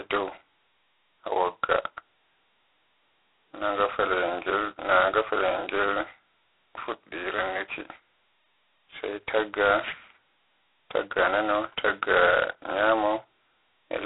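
From start to finish the speech carries a harsh, rasping hiss that tracks its level, squeezed into a 300 Hz to 3.4 kHz telephone band with nothing above 3.9 kHz. This is heavy G.726 ADPCM coding, where too few bits per sample describe each prediction error, which fits 16 kbit/s.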